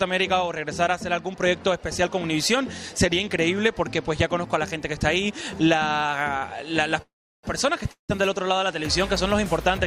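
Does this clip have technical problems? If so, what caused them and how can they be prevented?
Yes. At 6.37 to 6.45 s there is a short stall from a late packet: one packet arrived after its playout time, the jitter buffer emptied, and the receiver stretched the last sound by about 44 ms before resuming exactly where it left off. It is a brief held tone with a faint buzz, with nothing lost and no silence, which sets it apart from a freeze. A slightly deeper or adaptive jitter buffer would absorb this lateness.

Two call audio freezes follow, at 7.02 to 7.46 s and 7.91 to 8.12 s. Each time, the sound is held as a fading buzz and then drops to silence, for about 350 ms in the first and 120 ms in the second, before resuming with nothing skipped. The extensions total 415 ms and 175 ms. The long fade into silence distinguishes these from the short stall, and the likely cause is packets held up in the network so the buffer ran dry for much longer. 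Prioritising call traffic on the network and easing congestion, for example with QoS marking and a stable connection, would prevent these.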